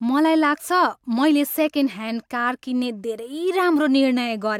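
A speech recording with nothing technically wrong with it.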